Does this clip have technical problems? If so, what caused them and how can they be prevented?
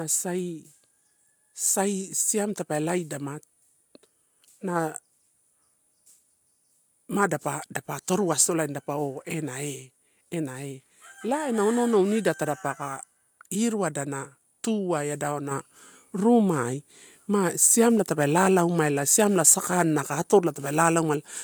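Yes: at 15.51 s the microphone volume stepped up by about 6 dB, lifting voice and background together, unlike a speaker leaning closer. Turning off automatic input-gain adjustment and setting a fixed level beforehand prevents it.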